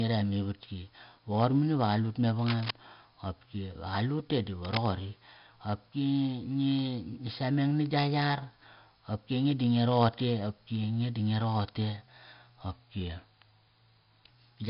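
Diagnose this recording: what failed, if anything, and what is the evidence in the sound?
The codec stage failed: the speech went through heavy 4-bit ADPCM compression, which fits a rate of around 44 kbps. The coarse prediction steps leave gritty hiss riding on every loud syllable, smeared consonant attacks, and nothing above 5.3 kHz throughout.

In the analogue wiring, cable scratch noise was likely caused by a worn connector or cable being disturbed, its contact resistance jumping erratically. Dense, uneven rustling bursts sit only a few dB under the speech from 2.39 to 2.71 s and from 4.63 to 4.86 s.

At the driver or buffer stage, a drift correction step shows up from 12.72 to 14.27 s, likely clock-matching software slowing playback in one jump to rebalance its buffer. Speed drops 5.37% and pitch falls 95.6 cents, nearly a semitone, then snaps back.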